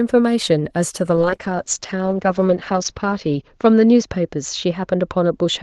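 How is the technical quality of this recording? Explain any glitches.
The recording has one clear glitch, a call bitrate drop that degrades the speech from 1.16 s to the end.

From 1.16 s the speech turns rough and watery, and the top end narrows from about 12 kHz to 8 kHz. The call's bandwidth estimate fell, so the Opus encoder was given fewer bits, consistent with a drop from roughly 32 to 8 kbps, and it coded more coarsely. The worst stretch lasts about 1.77 s. It differs from packet loss because the sound degrades steadily without gaps or stutters, and from a plain low-pass filter because the texture itself becomes grainy and smeared, not just duller.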